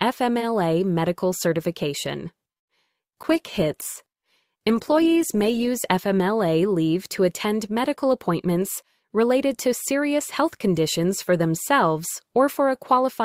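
At 2.57 s the sound stops dead for about 100 ms, a short silent hole running to 2.69 s, and then picks up exactly where it left off with nothing lost. That's a call audio freeze. Packets were likely held up in transit, the jitter buffer ran dry, and the receiver simply waited. The cost is a tenth of a second of added delay rather than missing audio, so it comes across as a hiccup in the flow.

Right behind it come two bits of short concealed packet loss, from 2.75 to 2.78 s and from 2.84 to 2.88 s. This time audio really did go missing, about 40 ms and then about 20 ms, and the receiver papered over each gap by extending the last bit of sound before blending back into the real signal. You hear a quick smear or flutter rather than a clean gap. The first one also trims back some of the delay the freeze had just added.

From 3.24 to 5.76 s there's a call bitrate drop. The bandwidth estimate fell and the encoder was pushed from 48 kbps down to 15 kbps, staying at the bottom for about 2.45 s. 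At that rate Opus codes everything much more coarsely and drops the top end, so the sound goes dull, muffled and a bit watery until the rate climbs back.

Finally there are two stretches of jitter buffer speed-up, 8.04 to 8.62 s at 107% and 9.03 to 9.66 s at 108%. The buffer was holding more than it wanted, so the receiver snipped out tiny pitch-period slices, about 50 ms in total each time, to catch up. Pitch stays put, but those moments sound slightly rushed, as if someone nudged the playback speed up.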